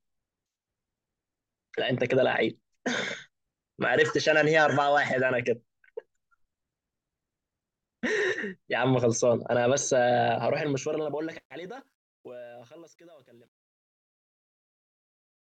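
From 10.24 s the speech fade-out shows truncation distortion on a fade: the gain stage drops bits without dither, consistent with 11-bit resolution, so from 12.5 s to 15.58 s the tail turns gritty.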